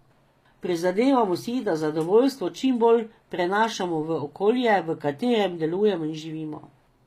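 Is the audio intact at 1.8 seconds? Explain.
No. At 1.8 seconds, as throughout the clip, the speech carries plainly audible damage, likely from HE-AAC compression at a bitrate that fits about 24 kbps. The treble is present up to 14.9 kHz, with nothing above, but it is rebuilt by copying lower bands upward rather than coded directly, so s sounds come out gritty and metallic. That synthetic brightness sets it apart from a plain low-pass, which would sound dull instead.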